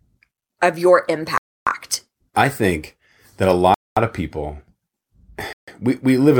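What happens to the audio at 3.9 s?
At 3.9 s the speech is in a dropout running from 3.74 to 3.97 s, about 224 ms of silence, likely a Bluetooth stall where interference delayed packets until the headphones' buffer emptied. The waveform goes flat and the spectrogram shows a blank vertical band before sound resumes.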